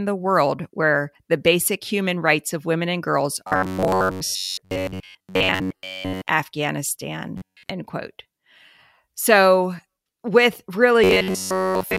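Just after "of women and girls", from 3.48 to 6.30 s, the speech turns into a rigid, metallic buzz pitched at 93.8 Hz. It returns from 7.38 to 7.70 s and from 11.04 s to the end. This robotic sound from repeated short buffers is likely caused by audio arriving too seldom, so a segment of about 10.7 ms is looped in its place. Most of the signal is repeated material, while the words stay roughly traceable.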